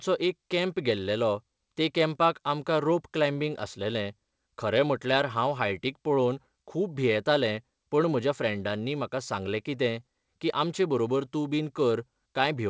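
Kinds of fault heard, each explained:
Clock drift between sender and receiver: Present through the whole clip. The sending side's audio clock runs roughly 3% slower than the receiving side's, so the receiver's jitter buffer keeps draining instead of holding steady. To avoid running dry, the receiver must keep stretching the audio with small inserted repeats. The result is a speech stream that never quite keeps pace, with brief timing hiccups surfacing at uneven intervals.
Repeated timing corrections: From 0.08 s to 12.58 s the receiver repeatedly patches the drift by duplicating short slices of speech, all in the same lengthening direction. Playback runs at about 98% speed, and the patches add up to roughly a third of a second of extra material. Each edit is tiny and irregularly spaced, so the speech sounds faintly dragging and unsteady in tempo, with occasional slight stutters, all heard through a call-codec band that stops at 8 kHz.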